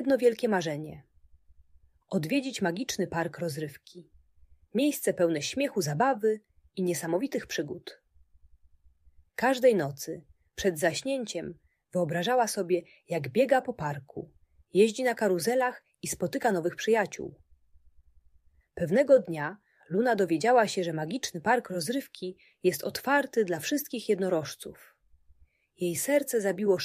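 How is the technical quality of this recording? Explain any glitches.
No glitches, dropouts, distortion or timing faults show up anywhere in the recording, so there is nothing to explain.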